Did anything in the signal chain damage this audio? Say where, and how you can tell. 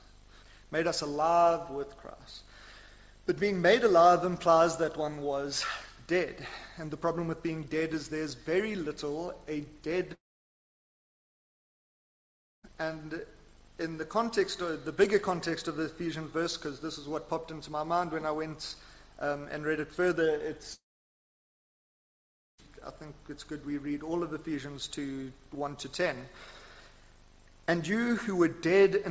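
Yes. At the network stage, the audio was likely hit by a long network dropout, twice. From 10.14 to 12.65 s and again from 20.73 to 22.60 s, the sound breaks into a brief fading buzz and then about 2.4 s and 1.8 s of silence. When it resumes, roughly 2.5 s and 1.9 s of material are simply gone. The receiver's concealment ran out once packets stopped arriving. Across the rest, the G.722 call path leaves nothing above 8 kHz.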